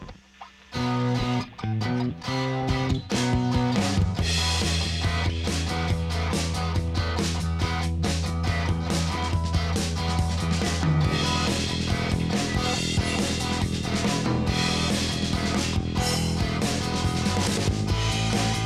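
No technical faults can be heard anywhere in the clip. Nothing in the audio drops out, breaks up, repeats or changes level abruptly at any point.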